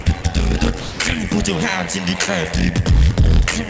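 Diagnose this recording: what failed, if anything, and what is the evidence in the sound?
The overlap-add ripple sits in the frame-based processing stage of the call chain and runs through the whole clip. The level swings by about 11 dB at a rate of around 100 Hz, which comes across as a metallic, buzzy roughness with added tones around the sound. The frames were windowed and reassembled with an overlap whose windows do not add up to constant gain. Each frame boundary therefore imposes its own level dip, and a repetition rate that fast points to frames of roughly 10 ms.

Three gaps are filled with steady noise, and the voice detector at the sending end is the likely cause of sound being dropped. The first runs from 0.02 to 0.06 s (40 ms), the second from 0.22 to 0.24 s (20 ms), and the third from 0.80 to 1.00 s (200 ms). About 20 ms, 20 ms and 160 ms of real audio are lost in them. The detector classed that material as background and stopped sending, and the receiver played comfort noise until transmission resumed. 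Throughout, nothing is heard above 8 kHz, which fits the wideband call codec on this path.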